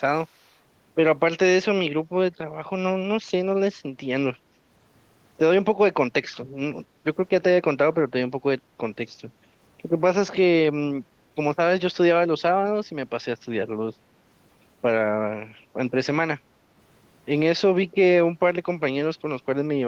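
From 0.22 to 0.57 s there is an echo leak, most likely from a far end playing the call on a loudspeaker whose echo canceller failed to fully suppress what its microphone picked up, so a residue was sent back down the line. The result is a delayed copy of the speech trailing the original by about 240 ms. It sits very low, far beneath the direct speech, and is heard only as a faint, brief ghost.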